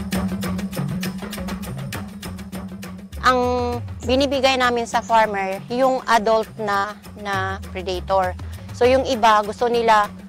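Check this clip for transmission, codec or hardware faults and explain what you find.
One fault is audible, a burst of packet loss from 6.77 to 6.86 s. Several consecutive packets failed to arrive in time to be played. The receiver covered the gap by extending the last sound it had, for about 66 ms, while lowering its level. The result is a brief held, fading tail instead of new material. Playback then resumes later in the stream, and about 60 ms of the original audio is gone.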